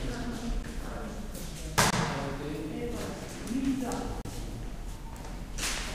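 Blocks of digital silence fall at 0.63 s, 1.90 to 1.93 s and 4.21 to 4.25 s, where output buffers apparently went unfilled and were zeroed. The sound drops abruptly to nothing and returns with no fade. The 12 ms gap is a tick, fitting a 512-sample buffer. The 23 and 35 ms gaps are brief holes.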